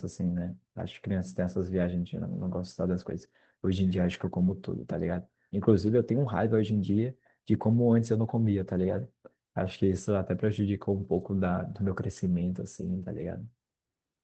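Lost packets rebuilt from error correction occur at 2.57 to 2.59 s, 4.13 to 4.15 s, 5.85 s, 7.53 s and 9.65 to 9.71 s. Each spot sounds briefly rougher and noisier, without a gap. The last, 60 ms long, points to two lost packets in a row. The Opus call path caps the band near 8 kHz.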